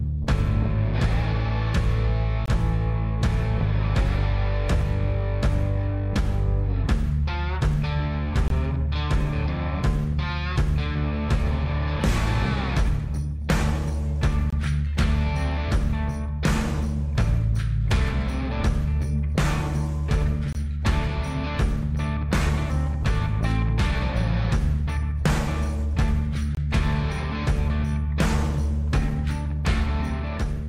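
A gap between chunks recurs five times: 2.46–2.48 s, 8.48–8.50 s, 14.50–14.53 s, 20.53–20.55 s and 26.55–26.57 s. The audio arrives in 6-second chunks. At each join, about 23 ms of silence is inserted before the next chunk starts. Nothing is lost from the sound itself. It simply stops and resumes. The result is a brief dropout every 6 seconds.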